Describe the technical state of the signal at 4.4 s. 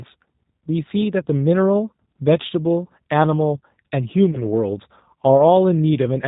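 At 4.4 s the speech sits inside a VoIP packet loss concealed by the speech codec, running from 4.31 to 4.43 s. One packet of about 20 ms went missing. The decoder filled the gap by extending its last pitch and filter with falling gain. That gives a brief fading smear, stretched into a buzzy tone or coloured noise. Recovery stays weak for a few more frames.

The whole clip also carries G.729 codec coding at 8 kbit/s. It rebuilds speech from a vocal tract filter, a pitch predictor and sparse pulses. So here too the sound is band-limited below 4 kHz, with a plainly audible rough, synthetic edge.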